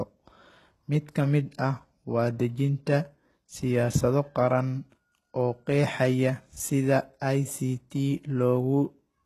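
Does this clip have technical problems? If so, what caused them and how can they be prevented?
Yes. Throughout the speech, s sounds turn gritty and lispy, likely from HE-AAC compression at a bitrate near 16 kbps. The codec copies treble up from lower bands, so harmonics misalign, and a spectrogram shows blocky, smeared treble stopping at 12.3 kHz. Prevent it with a higher bitrate.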